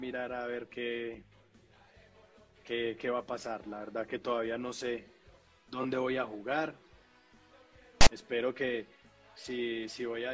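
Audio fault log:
8.01–8.07 s, file tags played as audio: a block of text tags is decoded as samples, giving a brief, hard-edged loud rasp offset toward one side.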